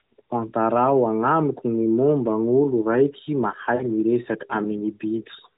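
Lost AMR speech frames at 3.76 to 3.87 s interrupt this narrowband speech recording, which is band-limited below 4 kHz. About 40 ms of data went missing, roughly two frames, so the decoder stretched the last good pitch and vocal-tract settings with dropping gain, giving a smeared, fading warble before recovering.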